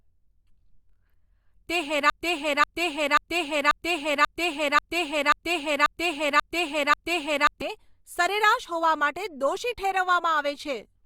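Broken-record loop from 2.10 to 7.62 s: a 0.54 s fragment repeats exactly ten times, likely from a stalled stream, losing the speech before "સરેરાશ હોવા".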